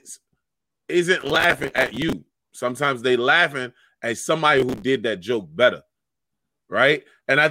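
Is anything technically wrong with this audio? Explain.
Yes. The speech has processor overload crackle from 1.21 to 2.13 s and again from 4.57 to 4.82 s. The processor fell behind on buffers of around 5 ms, and each missed one replayed stale audio with hard edges, so the sound turns gritty and torn until the load eases. A spectrogram shows dense vertical broadband streaks through both stretches, and the waveform shows short repeated segments joined by abrupt steps.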